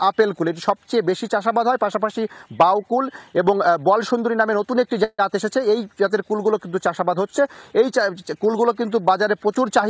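At 5.04 to 5.21 s, stalled packets likely emptied the jitter buffer, causing a call audio freeze: the last sound stretches into a fading buzz, falls briefly silent, then resumes where it stopped.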